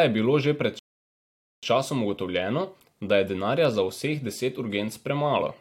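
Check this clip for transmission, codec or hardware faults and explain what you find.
One transmission fault stands out: a rebuffering stall early in the clip. From 0.79 s to 1.63 s the speech cuts abruptly to silence, holds there for about 0.84 s, and then picks up at exactly the point where it broke off, with nothing skipped or repeated. This happens when the player drains its store of downloaded audio and halts until more data arrives. No audio is lost, but the pause adds 836 ms to the clip's running time.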